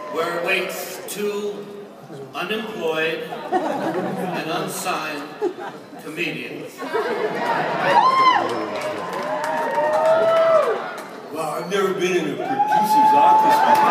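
No technical faults are audible.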